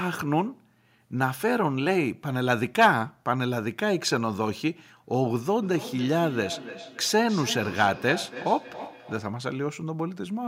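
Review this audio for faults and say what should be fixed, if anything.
From 5.62 to 9.38 s there is feedback echo between two devices: speech comes back about every third of a second, at most about 13 dB below the direct sound, because a second device in the room replays this microphone and its own canceller ignores that playback. Unlike room reverberation, the repeats arrive at a fixed spacing instead of a smooth decay. To prevent it, mute the microphone or speaker on one of the two devices sharing the room.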